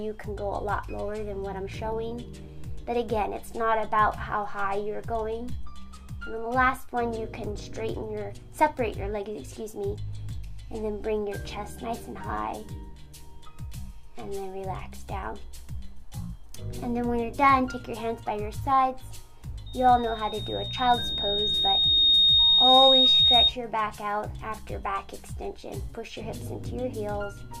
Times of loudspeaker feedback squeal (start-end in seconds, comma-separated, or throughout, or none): 19.66-23.53